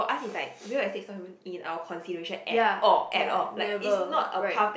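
Speech recording with no audible technical faults.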